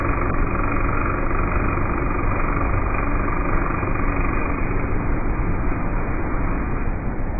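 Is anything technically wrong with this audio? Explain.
Yes. Throughout, the audio sounds dull and smeared, with nothing above 2.5 kHz and a warbling, fizzy texture on sustained sound. The likely cause is heavy AAC compression at a very low bitrate, around 12 kbps, which lowers the cut-off and leaves holes in the spectrum.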